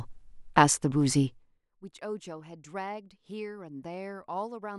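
Speech, and at 1.25 s there's zipper noise that runs to about 1.61 s while the level drops by roughly 25 dB. The gain is being stepped rather than ramped, around 400 small jumps a second, which points to the level being updated once per short buffer with no smoothing between. Each jump leaves a tiny click, so you hear a fine ticking buzz riding on the speech through the fade.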